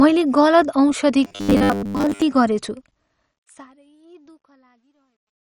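The speech in this clip carries MP2 compression throughout: dull, gurgly and granular. This fits a low MPEG Layer II rate around 48 kbps, where starved upper sub-bands drop out. A spectrogram shows upper bands cut off, with patchy blocks flickering beneath. From 1.25 to 2.22 s there is robotic sound from repeated short buffers, a rigid metallic buzz at 100 Hz. This is likely the playback software repeating 10 ms chunks to cover late audio, so most of that stretch is replayed rather than new. On a spectrogram it appears as evenly spaced 100 Hz harmonic stripes, and the waveform shows identical short cycles tiled end to end. The fade-out runs to 5.43 s. From 2.72 s to the end, that fade suffers truncation distortion. The gain stage keeps too few bits and adds no dither, which fits a 12-bit stage, so the quiet tail turns gritty. It is worst from 4.21 s on. The waveform there is reduced to a few square steps, and a spectrogram shows broadband grit over the fading sound.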